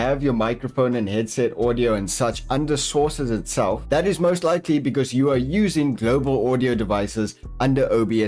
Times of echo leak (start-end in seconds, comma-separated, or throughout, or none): none